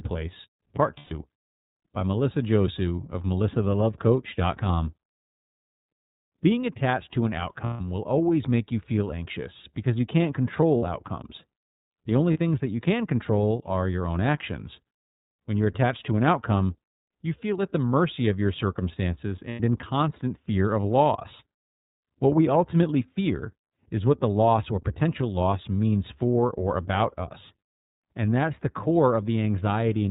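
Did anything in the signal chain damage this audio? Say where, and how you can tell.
Yes. The iLBC codec damages the whole clip. The speech is cut off above 4 kHz and sounds clearly rough and synthetic. That fits a 13.33 kbps narrowband VoIP coder that codes each 30 ms frame's excitation on its own.

Lost iLBC frames occur in the network stage at 0.99 s (120 ms), 7.64 s (150 ms), 10.77 s (60 ms), 12.33 s (30 ms) and 19.50 s (90 ms). Each gap becomes a held, buzzy vowel as the decoder repeats the last pitch cycle mixed with noise. The speech recovers immediately afterwards.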